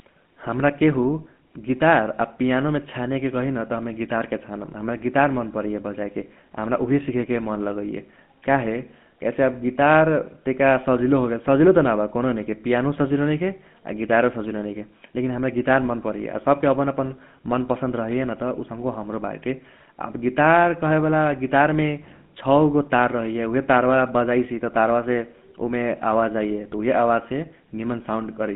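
Speech throughout carries GSM full-rate codec damage: a buzzy, gravelly roughness from pulse-driven vocal-tract modelling, plainly audible, at a rate that fits 13 kbps. A spectrogram shows energy confined to about 150 Hz–3.5 kHz, with coarse, smeared harmonics.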